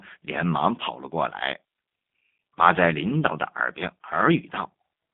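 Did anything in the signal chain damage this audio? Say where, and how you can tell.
Yes, at the codec stage: G.729 coding throughout, with a 150 Hz to 3.5 kHz band and a rough, synthetic buzz from pulse-based excitation, consistent with 8 kbit/s.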